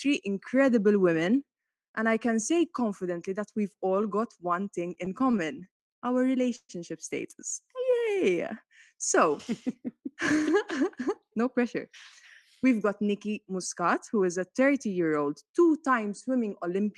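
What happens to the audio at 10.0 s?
Nothing goes wrong at 10.0 s: the audio passes through intact, with only the ordinary coding of the call path and its top end tapering off around 12 kHz.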